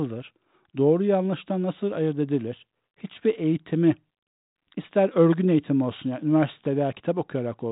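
Listening to this speech recording, nothing stood out as a technical problem.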